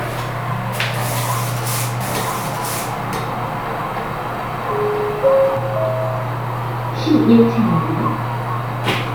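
A clip of sounds, and from 2.01 s to 5.57 s you get a doubled audio track: a second full-band copy trails the original by about a second, at roughly the same level. The copy is dry, with no decay or room colour, and it cuts in and out abruptly at both ends. The likely culprit is the audio being picked up a second time through a slower path, or an edit that left two copies out of step.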